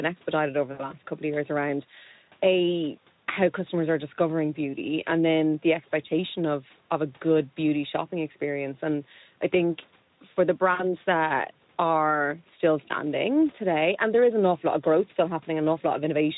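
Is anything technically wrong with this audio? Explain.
Yes. There is VoIP packet loss concealed by the speech codec, from 0.71 to 0.89 s and from 10.74 to 10.87 s. About 80 ms and 60 ms of audio went missing. The decoder extended its last pitch and filter with falling gain. The sound smears into a fading buzzy tone or coloured noise and stays weak briefly afterwards.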